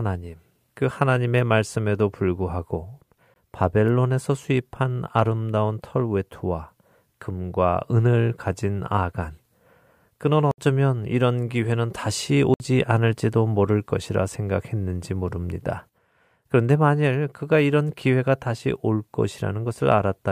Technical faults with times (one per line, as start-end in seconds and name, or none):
3.34-3.36 block of digital silence
10.51-10.58 block of digital silence
12.54-12.60 block of digital silence